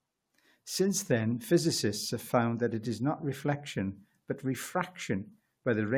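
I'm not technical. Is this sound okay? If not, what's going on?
Yes, no faults are audible.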